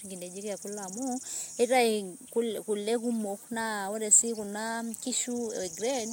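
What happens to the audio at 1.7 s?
Nothing goes wrong at 1.7 s; the speech there plays through intact, with no dropout, click, distortion or other fault.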